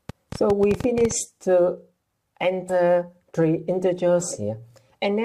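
From 0.09 to 1.12 s a train of clicks, about fifteen irregular pops at roughly 11.8 per second, up to about 10 dB above the audio, likely from electrical interference. At 2.7 s compressed frames were skipped: roughly 70 ms jumps forward, which fits a few 20 ms frames.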